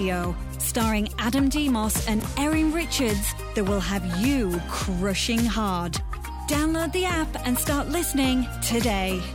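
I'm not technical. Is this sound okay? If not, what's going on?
No, not quite. At about 2.2 seconds two tiny slices of audio, each 20 milliseconds long, play swapped, a fault called chunks out of order. Nothing's missing, but you get a quick jumbled blip, gone by 2.24 seconds.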